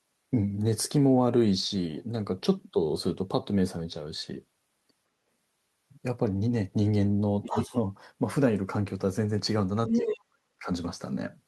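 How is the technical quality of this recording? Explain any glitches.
The recording has two short echo-related problems late in the clip, both in the same pattern.

Other side's voice leaking through: from 7.43 to 7.63 s a second voice slips in, only slightly quieter than the talker. It returns from 9.87 to 10.16 s at about equal loudness. The likely cause is loudspeaker playback that the echo canceller failed to remove from the microphone.

Speech suppressed in double talk: from 7.52 to 7.75 s the talker's voice dips by about 10 dB for roughly a tenth of a second. From 9.89 to 10.68 s it falls far deeper, around 35 dB, across most of that span. This is likely the canceller turning both voices down while both sides spoke at once.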